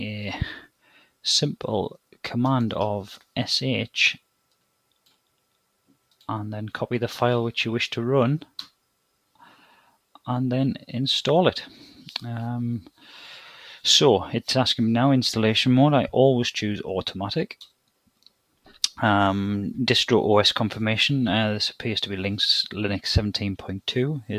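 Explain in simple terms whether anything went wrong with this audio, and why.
The noise suppressor mistook part of the sound for noise between 0.83 and 1.06 seconds, so it was cut: that brief stretch drops noticeably quieter.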